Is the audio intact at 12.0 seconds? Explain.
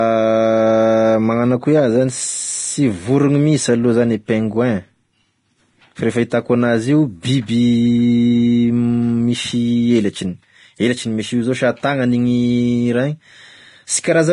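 No. At 12.0 seconds, as across the whole clip, the speech carries heavy damage from Vorbis compression, most likely the cause here and consistent with a low bitrate around 30 kbps. The codec keeps a smooth spectral outline but quantises the fine detail so coarsely that much of it turns into noise, and nothing survives above 10.6 kHz. The result is a hissy, grainy texture with dulled treble, roughened tone and smeared consonant onsets.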